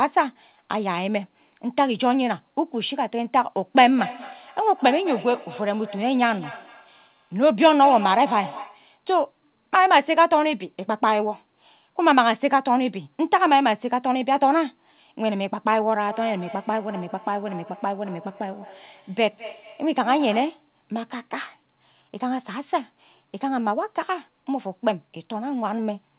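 From 3.78 to 8.91 s, and again from 16.08 to 20.72 s, each stretch of speech comes back roughly every fifth of a second, thinner and ringing, peaking about 13 dB and then about 18 dB below the voice. This is feedback echo between two devices: a second device in the room replays the call, and the other device's microphone picks it up, which its canceller cannot remove. The narrow, 4 kHz-limited call sound carries these repeats.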